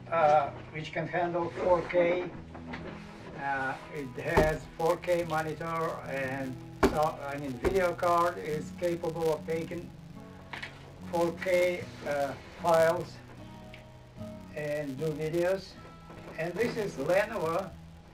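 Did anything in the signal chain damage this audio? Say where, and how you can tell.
Yes. From 3.95 s to the end, a processing filter restarted on every block, starting each from silence, giving a level-following 200 Hz buzz, which fits 5 ms blocks.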